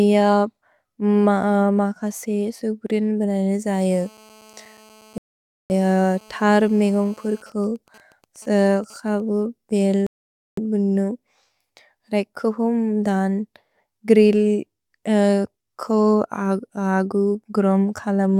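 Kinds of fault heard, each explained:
GSM phone buzz: a 2G handset in a call, bursting about 217 times a second, gets rectified by the audio circuitry into a hard raspy buzz from 3.91 to 7.42 s, about 29 dB below the speech; a spectrogram shows a comb of lines at 217 Hz and its harmonics.
Bluetooth stall: the sound drops to dead silence for about 0.52 s at 5.18 s and 0.51 s at 10.07 s, then resumes, likely because interference delayed packets and the headphone buffer emptied; the waveform shows flat gaps with clean edges.
GSM signalling bursts: from 7.46 to 9.20 s, just before "बेल् बुनु", the phone, in a call with its user silent, sends only short groups of bursts, heard as even ticks with a longer buzz twice a second at around 30 dB below the speech, appearing as intermittent 217 Hz harmonic stripes.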